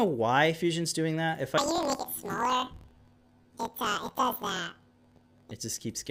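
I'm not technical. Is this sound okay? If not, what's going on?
No. From 1.58 to 5.52 s there's a fault called planar audio read as interleaved. Each 24 ms block, all left channel then all right, is read as alternating pairs, so the sound jumps an octave higher and flutters at about 42 times per second.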